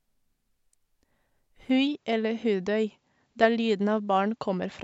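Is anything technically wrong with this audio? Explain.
Yes. From 1.70 s to the end, the recording has likely switched its input to a poorer device. The new microphone path passes a narrower band, with nothing above 7.6 kHz, so the speech turns duller and boxier at that point. The change is immediate, with no gap at the switch. The level shifts by roughly 5 dB, and a faint new background noise, around 50 dB below the speech, appears with the different device.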